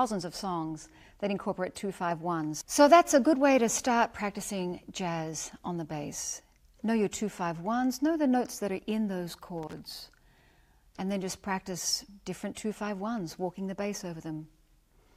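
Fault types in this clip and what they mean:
Loose connector crackle: A brief, irregular burst of crackle and scratching runs from 9.63 to 9.73 s, about a tenth of a second. It sounds like a worn or dirty contact rapidly making and breaking as it shifts, chopping the signal on and off. A waveform shows jagged dropouts and spikes in that window. A spectrogram shows scattered broadband vertical streaks rather than a smooth band.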